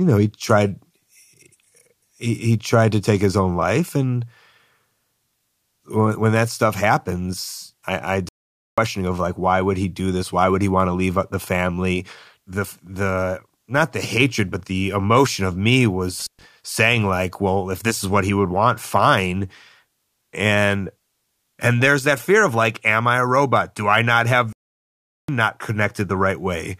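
At 8.29 s, just after "stuff happens I I", the speech halts in mid-flow for 0.49 s and resumes at "of like why would". This playback stall, and a second one at 24.53 s lasting 0.76 s after "I not", are likely the player running short of data or its thread being blocked, leaving dead silence until output recovers.

At 16.20 s, after "the emotion of me", an intermittent contact interrupts the signal: a loose connection opens for about 0.12 s, cutting the speech with crackle at both edges and faint hiss in the gap, before "saying like well if" returns.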